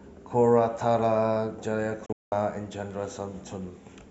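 At 2.06 s the speech drops out in a digital broadcast dropout that lasts until 2.32 s. The receiver lost valid frames and muted, fading out over about 3 ms. Across that 256 ms span, 224 ms of programme is missing, most of it in one 192 ms hole with a shorter gap beside it, which points to a handful of consecutive frames failing. On a waveform the signal collapses to a flat line; a spectrogram shows a clean vertical blank band across all frequencies.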